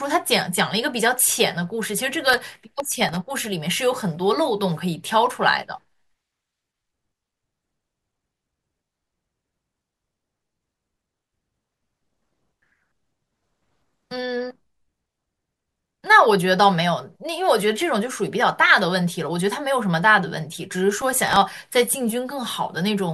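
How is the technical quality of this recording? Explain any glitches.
The recording has two bursts of processor overload crackle, from 2.20 to 3.16 s and from 20.98 to 21.37 s. The processor repeatedly missed deadlines on very short buffers, likely under a millisecond each, and replayed stale audio with hard edges, giving a gritty tearing over the speech.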